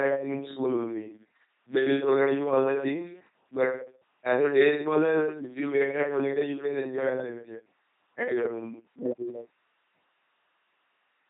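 From the first second to the last, the speech runs through an LPC-10 vocoder, and the damage is heavy. Each short stretch is rebuilt from a simple filter model. That filter is driven by either a pulse train or noise, never a mix. The result is a buzzing, mechanical robot voice. Wrong voicing choices add stray buzz or hiss. Nothing survives above 3.8 kHz, which fits the codec's 2.4 kbit/s rate.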